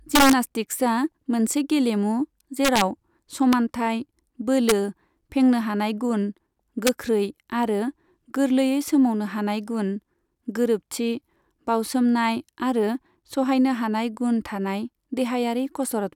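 Integer overflow cracks hit this speech at 0.15–0.33 s, just after "मोनसे गेलेमु" at 2.65–2.81 s, then 3.53, 4.69–4.72 and 6.87–6.89 s: peaks pushed up to about 3 dB past full scale wrap to the opposite sign instead of limiting, giving violent snaps.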